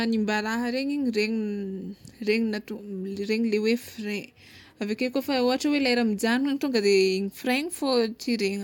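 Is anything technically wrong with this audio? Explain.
No, nothing in the recording points to a technical fault in the signal path.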